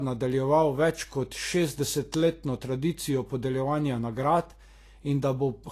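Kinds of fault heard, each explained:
Low-bitrate audio saved at a high bitrate: the speech runs dull and closed-in throughout, with nothing at all above 14.2 kHz, a hard ceiling that a 192 kbit/s MP3 would not impose by itself. The cause is likely an earlier low-bitrate encode, which fits Vorbis at around 36 kbit/s, later re-saved as MP3 at a high rate. The larger file cannot bring back the top end or detail the first codec discarded.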